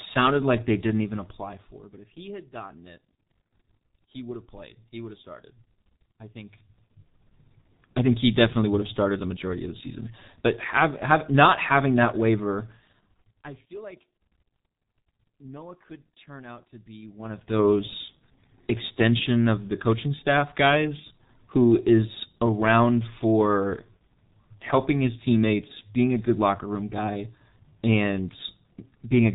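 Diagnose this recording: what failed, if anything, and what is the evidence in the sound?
The codec stage failed: the speech has passed through a G.723.1 codec, and the damage is heavy across the whole clip. Nothing reaches above 3.8 kHz, so the voice sounds muffled, and hoarse roughness and smeared consonants point to a very low rate, consistent with the 6.3 kbit/s mode. On a spectrogram there is a hard ceiling at 3.8 kHz with empty space above it, and the harmonics below look blurred in 30 ms blocks, because the codec's voice model updates only once per frame.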